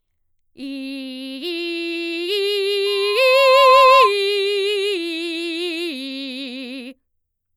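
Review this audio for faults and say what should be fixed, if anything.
Loudspeaker feedback squeal, 2.86 to 4.13 s. The mic picks up the speaker. A 1 kHz tone swells within a second to about 10 dB above the music. To prevent it, aim speakers away from mics and reduce gain.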